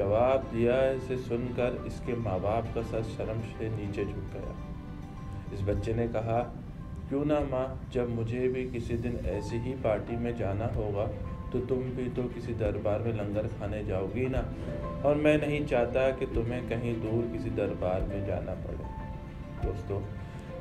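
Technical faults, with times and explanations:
No technical faults can be heard anywhere in the clip, and the signal stays intact throughout.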